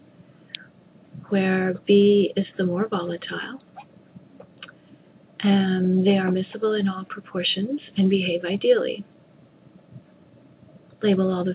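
Nothing stood out on listening, with the sound carried over a call path whose top end stops at about 4 kHz, which fits a G.711 mu-law link at 64 kbps.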